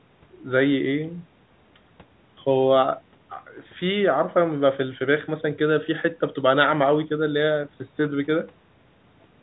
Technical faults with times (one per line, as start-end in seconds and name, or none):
none